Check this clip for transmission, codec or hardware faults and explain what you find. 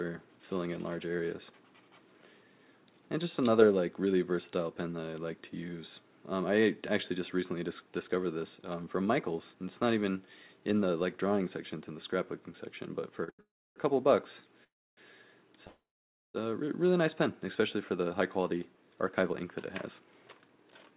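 Three kinds of network-delivery fault appear, all between 13 and 21 seconds, on a call path whose audio stops at 4 kHz, which fits G.711 at 64 kbps.

Short stalls from a late packet occur at 13.24 s (36 ms) and 13.30 s (91 ms). Packets arrived late, so the last sound is held briefly, with nothing lost.

Call audio freezes run from 13.41 to 13.78 s, 14.64 to 14.99 s and 15.67 to 16.36 s. These are likely caused by delayed packets emptying the jitter buffer. Each freeze is a fading buzz or hiss that drops into silence for about 300, 290 and 540 ms before the audio resumes where it stopped.

Jitter buffer speed-ups run from 18.01 to 19.44 s at 109% and from 20.00 s to the end at 111%. Pitch-period slices are trimmed to shed the added delay, removing about 150 ms and then about 100 ms, so the audio sounds hurried at unchanged pitch.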